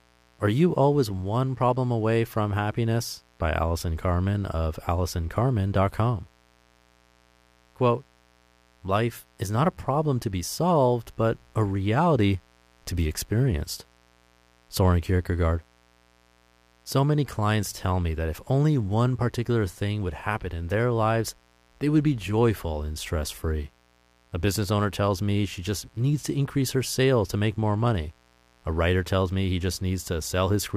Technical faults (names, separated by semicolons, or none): mains buzz